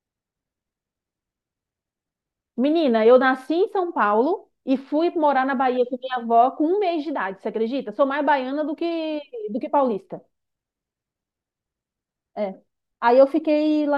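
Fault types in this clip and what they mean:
No faults present in this clip.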